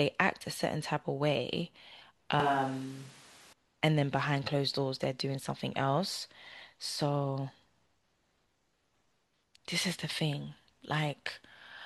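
From 2.40 s to 3.53 s the speech abruptly turns hollow and roomy, with thinner low end and a background noise floor sitting about 25 dB below the speech, then snaps back just as suddenly. This is likely a switch to a distant microphone, with the close mic dropped for that stretch. The level barely changes, so the waveform envelope looks similar, but a spectrogram shows weakened low frequencies, smeared reverberant tails between syllables, and a raised noise floor.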